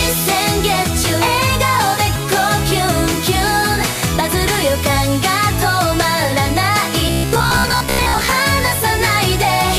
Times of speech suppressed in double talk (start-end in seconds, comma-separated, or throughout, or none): none